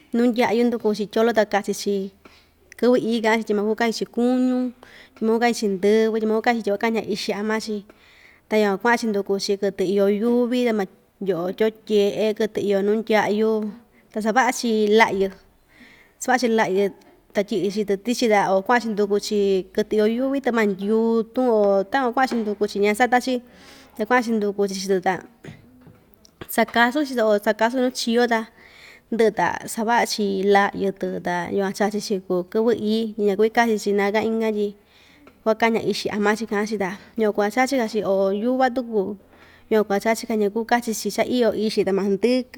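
No technical faults can be heard anywhere in the recording.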